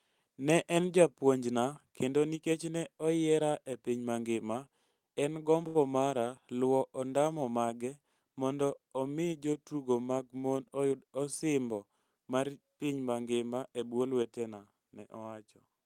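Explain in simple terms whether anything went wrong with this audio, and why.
Two brief glitches can be heard in this speech recording.

The first is a short stall from a late packet, from 5.67 to 5.77 s. A piece of the audio arrived too late, and the receiving side ran out of sound to play. Instead of going silent, it stretched the last bit of sound for 75 ms, then carried on exactly where it left off. Nothing is lost, but one sound is held too long, with a faint buzz or dip, and everything afterwards plays 75 ms later than before.

The second is a jitter buffer speed-up, from 10.60 to 11.23 s, between "omi jotugo mag mon" and "osimbo mar piny mangima". The receiver had built up more stored audio than it wants, so it trimmed many tiny slices out to catch up, roughly a tenth of a second in total. The speech plays at 113% speed over that stretch without any change in pitch, so it sounds briefly rushed.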